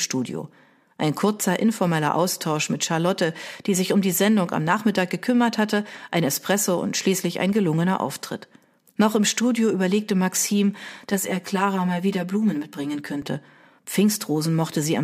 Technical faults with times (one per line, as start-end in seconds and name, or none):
11.10-13.22 channel delay (comb filtering)